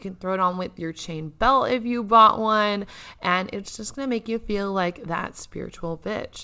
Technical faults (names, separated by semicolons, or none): none